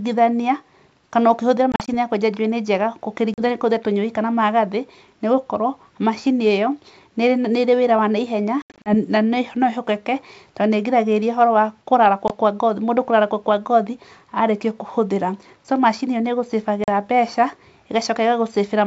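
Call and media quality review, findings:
Packet loss on ADPCM call (G.722 link): lost packets replaced by silence, decoder predictor and step size desynced. Hard-edged holes at 1.72–1.88 s (after "kana ũkĩhũthĩra", before "ya kwenja njuĩrĩ"), 3.34–3.41, 8.62–8.95 (160 ms lost), 12.28–12.33, 16.84–16.90 s; sound resumes with brief slight distortion.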